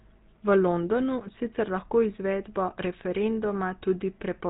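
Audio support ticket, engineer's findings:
GSM full-rate codec, throughout. Buzzy, gravelly speech from pulse-excited vocal-tract model on sparse excitation; nothing above 3.8 kHz. Plainly audible, fits 13 kbps stream.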